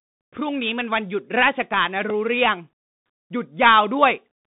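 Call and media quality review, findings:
Bluetooth CVSD headset codec, whole clip: speech squeezed to roughly 150 Hz to 3.7 kHz, nothing above 3.8 kHz, scratchy s sounds and granular hiss. The 1-bit up/down steps can't keep pace with fast high content.

Repeated buffer at 2.1 s: brief click-buzz where a tiny slice plays three times back to back, which fits a 64-sample buffer starving and replaying. It drops only a few milliseconds of speech.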